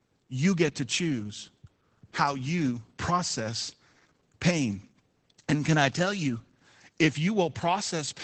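Opus voice compression runs through the whole clip. The speech has nothing above about 8.6 kHz, which fits the coder working in its wideband SILK mode, where linear prediction models the voice and the fine excitation detail is quantised coarsely. The damage is plainly audible: consonants and sibilance lose their top end, and voiced sounds take on a slightly hoarse, robotic texture. That pattern suggests a low bitrate, roughly 12 kbps.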